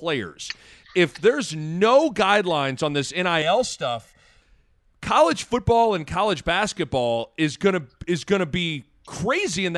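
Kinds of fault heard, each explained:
Channel delay (comb filtering): One channel runs late by roughly a millisecond and a half, and when the two are folded to mono, everything they share cancels at evenly spaced frequencies. The first notch sits somewhere around 300 Hz, with more stacked above it. You hear it from 3.42 to 4.42 s, right after "no guidelines on this" and clearing before "college football and college", where the speech turns briefly hollow and phasey.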